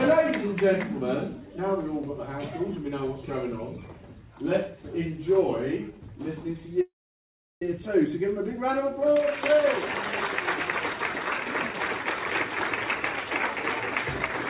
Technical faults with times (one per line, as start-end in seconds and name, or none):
6.81-7.62 call audio freeze